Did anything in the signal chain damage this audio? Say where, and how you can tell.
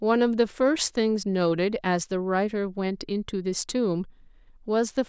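No, nothing along the chain has left a mark on this speech recording. No stage, from capture through to playback, shows any sign of having altered the signal.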